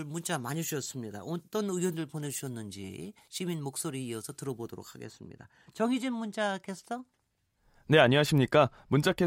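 From 0 to 5.05 s, pre-emphasis was left on: the 75 µs FM treble boost lacks its matching de-emphasis, lifting 10 kHz about 14 dB, so the speech sounds thin, bright and sibilant.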